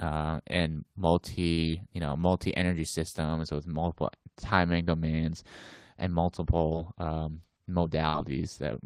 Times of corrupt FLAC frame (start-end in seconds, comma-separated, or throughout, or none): none